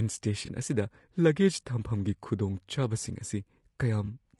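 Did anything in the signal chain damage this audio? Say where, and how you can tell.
Yes. At the codec stage, the speech is rough and grainy throughout, with noise filling the gaps between harmonics and a thin, synthetic top band. This is likely low-delay AAC compression (AAC-ELD). Its short frames resolve pitch poorly, and the damage points to a low bitrate of roughly 32 kbps.

At the network or decoding stage, AAC frame loss with concealment shows as brief smeared, noisy patches at 0.45 to 0.49 s and 4.05 to 4.08 s. Each gap fits a single lost 20 ms frame. The decoder patched it by extrapolating the previous spectrum, which blurs the detail there.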